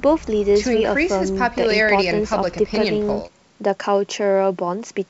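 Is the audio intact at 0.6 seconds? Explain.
Yes, the speech at 0.6 seconds is intact, with no dropout, glitch or distortion at that moment.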